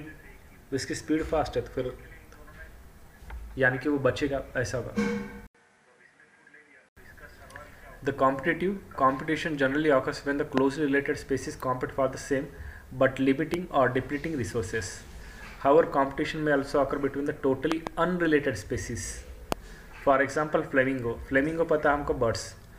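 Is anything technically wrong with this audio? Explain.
Yes, there are two kinds of trouble here.

From 5.47 to 6.97 s there's an input switched to a poorer device, likely the system hopping to another mic or a headset call profile. There's a gap of about 80 ms at the changeover, then the sound goes duller and boxier because nothing above 11.2 kHz gets through. The level drops by about 5 dB, and a new noise floor sits around 50 dB under the signal.

Then there are loud pops, each one a sudden voltage spike landing on top of the signal. Single pops hit at 10.58 to 10.60 s, 13.54 to 13.56 s and 19.52 to 19.54 s. A quick double pop comes at 17.72 to 17.89 s. Each one peaks roughly 20 dB above the surrounding sound, so they jump out as sharp thumps while the audio keeps running underneath. They most likely come from a plug, a switch, static or a driver glitch.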